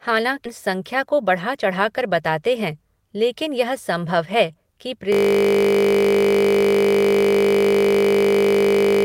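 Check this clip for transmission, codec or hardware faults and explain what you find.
Three faults are audible in this speech clip: a forward jump, a stretch of slightly sped-up playback, and a frozen buzzing loop that runs to the end.

At 0.45 s the sound jumps abruptly, with no gap, as though a piece has been cut out. About 0.7 s of audio is missing. This is a skip ahead: audio was dropped in transit or by an overflowing jitter buffer while later audio was already queued, so the two sides are spliced almost directly.

From 1.07 to 2.00 s the speech runs about 4% fast at unchanged pitch. This is a jitter buffer speed-up: the receiver held too much audio and repeatedly removed short pitch-period slices, roughly 40 ms in total, to reduce its delay.

From 5.13 s to the end, the sound freezes into a steady buzz at 50 Hz. A system hang loop causes this: the computer or driver stalled while the audio hardware kept replaying the same 20 ms ring buffer, repeating it about 200 times.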